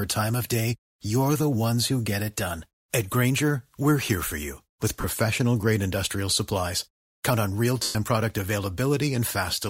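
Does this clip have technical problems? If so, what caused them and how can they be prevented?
Yes. Lost LE Audio frames occur at 5.01–5.04 s, between "here for you with" and "grade industrial supplies", and at 7.83–7.96 s, after "on real". The LC3 decoder covered the 30 ms and 120 ms gaps by repeating the last spectrum with random signs. This produces a noisy smear, and the longer gap fades toward silence. Shortening the Bluetooth link and reducing 2.4 GHz interference would prevent these dropouts.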